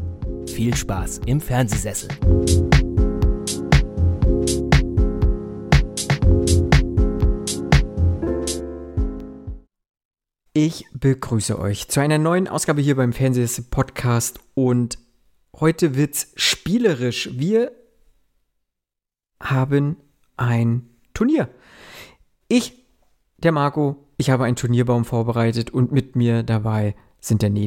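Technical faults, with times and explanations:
1.24 to 27.21 s, periodic USB or driver dropouts: every 2.0 s the driver briefly stalls and a sub-millisecond sliver goes silent, leaving evenly spaced ticks.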